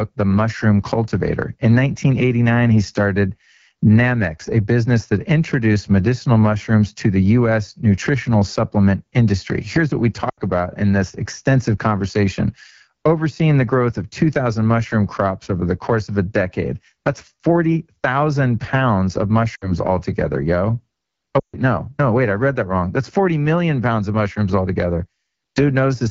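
Throughout the speech, the AMR wideband (HD Voice) codec leaves a plainly audible rough, raspy edge. The band above 6.4 kHz is filled with shaped noise instead of real detail, and the pulse-driven vocal tract model strains at this rate. The degree of coarseness points to one of the two lowest AMR-WB modes, likely 8.85 kbit/s, where the excitation coding is too sparse to keep voiced sounds smooth.

Lost AMR speech frames interrupt the audio three times. From 10.29 to 10.40 s, about 80 ms of speech, consistent with four frames, is replaced by the decoder repeating its last good pitch and vocal tract settings at falling gain, so the sound smears and sags. At 19.55 to 19.71 s a shorter gap of about 60 ms, or three frames, drops to near silence. The longest gap, at 21.39 to 21.56 s, covers about 140 ms and fits seven frames. It drops to near silence within two frames before the speech returns weak and rough.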